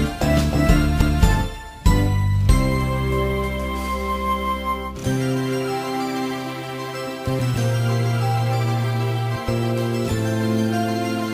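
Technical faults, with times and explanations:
1.01 s, CD skip: a knock or a flaw sent the laser pickup off its track onto another turn of the disc's spiral. The player muted for just a few milliseconds, heard as a tick, then resumed from a different point, so the sound abruptly jumps.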